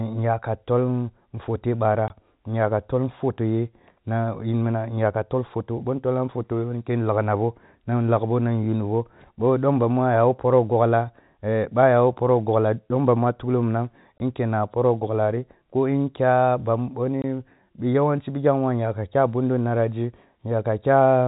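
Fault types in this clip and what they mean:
Packet loss filled with silence: single 20 ms packets drop out at 2.08–2.10, 14.19 and 17.22–17.24 s, leaving hard-edged gaps, not smoothed or repeated sound.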